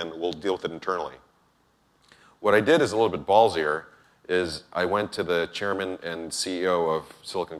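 Nothing here needs flagging; I listened all the way through and didn't hear a single technical problem anywhere in the audio.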